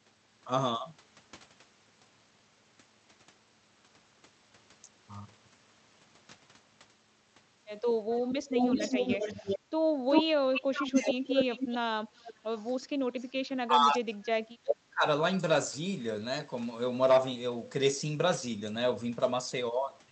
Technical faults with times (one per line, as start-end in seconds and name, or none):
8.12-13.32 echo leak
8.36-9.47 speech suppressed in double talk
10.91-11.48 speech suppressed in double talk
12.08-12.24 background gated by the echo canceller
13.67-15.05 speech suppressed in double talk